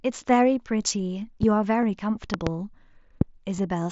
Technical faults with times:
1.43-1.45 loud pop
1.82 concealed Bluetooth headset packet loss
2.34-2.49 loud pop
3.21-3.24 loud pop
3.57 concealed Bluetooth headset packet loss

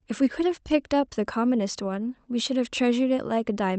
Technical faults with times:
none

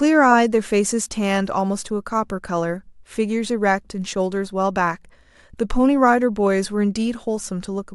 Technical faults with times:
none

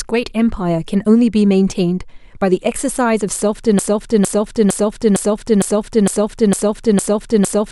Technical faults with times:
3.79-7.71 broken-record loop

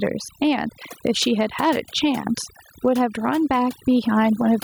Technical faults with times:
0.00-4.63 overdone noise removal
0.00-4.63 gain pumping

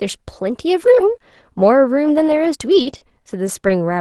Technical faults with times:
2.31-3.71 repeated packet loss (robotic sound)

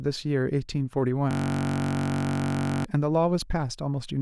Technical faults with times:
1.31-2.85 system hang loop

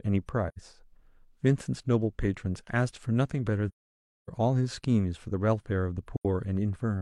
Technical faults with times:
0.48-0.58 AAC frame loss with muting
3.68-4.29 AAC frame loss with muting
6.16-6.25 AAC frame loss with muting

